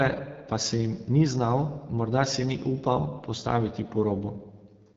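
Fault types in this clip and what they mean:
AMR wideband (HD Voice) codec: the speech is rebuilt from a pulse-excited vocal tract model, with shaped noise filling the top band and nothing above 7.5 kHz. The damage is plainly audible, a rough, raspy texture that fits a low rate near 8.85 kbit/s.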